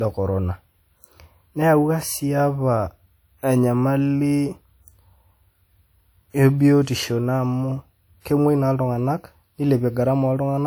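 Throughout the speech, the signal shows the signature of low-bitrate audio saved at a high bitrate. It was likely first coded at a modest rate, with traits that fit a 64 kbit/s WMA encode, and then stored again as high-rate MP3. The larger second file cannot rebuild detail the first pass threw away, so those earlier coding artefacts stay in the sound, even though the band still reaches about 20.2 kHz.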